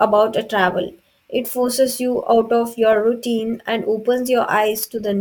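Sample clock jitter persists throughout: microsecond-scale timing errors add hiss swelling on loud, bright speech, seen as faint broadband haze over strong spectrogram bands.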